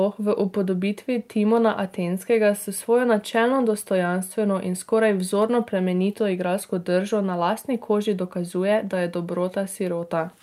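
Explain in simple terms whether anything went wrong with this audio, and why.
Listening closely to the recording, nothing stood out as having gone wrong.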